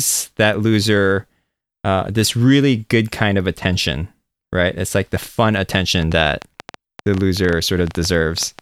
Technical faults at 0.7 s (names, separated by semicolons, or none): none